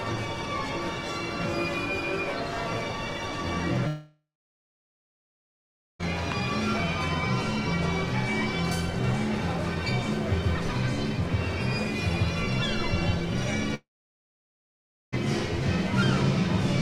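At 3.87 s the sound stops, and a fading buzz or hiss briefly carries it on before about 1.7 s of silence. The audio returns at 6.01 s with roughly 2.1 s missing. At 13.74 s the same thing happens: a short decaying tail, about 1.3 s of silence, and a return at 15.14 s with roughly 1.4 s gone. This is likely a long network dropout. Brief clicks or stutters pass quickly, but here the gap runs seconds and the audio resumes further on, without the lost part.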